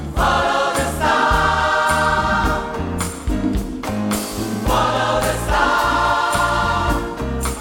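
Nothing in the audio stands out as a technical fault; it just runs along without a hitch the whole way.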